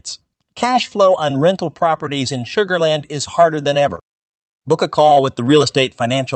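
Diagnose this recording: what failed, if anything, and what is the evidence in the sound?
A brief smear just after "is harder than", 3.95 to 3.99 s: short concealed packet loss, where about 20 ms was lost in the network and the Opus decoder extrapolated it.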